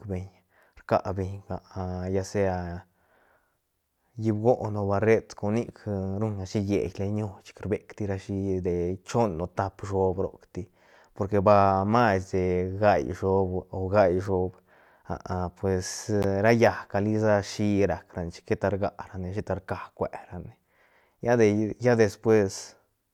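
At 16.23 s the speech drops out for about 14.5 ms just before "ra llaäcga", a short hole consistent with a single lost packet, likely a Bluetooth dropout.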